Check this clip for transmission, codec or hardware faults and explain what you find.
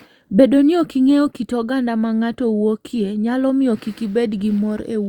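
Nothing to report: I can hear no fault anywhere in the speech.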